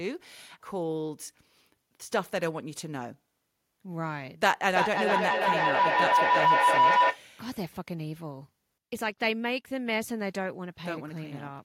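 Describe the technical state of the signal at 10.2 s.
At 10.2 s the signal is intact, with no audible technical fault at that point in the speech.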